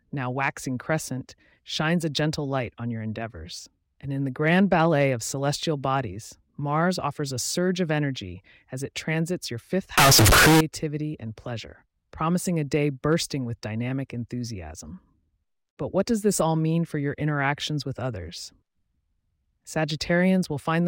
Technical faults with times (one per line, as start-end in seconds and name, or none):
9.98-10.61 float read as integer